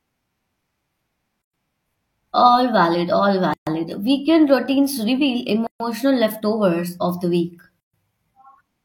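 Gaps at joins of encoded pieces open at 1.42–1.54 s (about 117 ms), 3.54–3.67 s after "valid all", 5.67–5.80 s after "routines reveal" and before "leftovers of the week", and 7.80–7.94 s after "leftovers of the week" (each about 133 ms). They arrive every 2.0 s. Each piece's encoder delay and final-frame padding stayed in at the join, so the speech drops into brief silence with smeared edges and then resumes where it stopped.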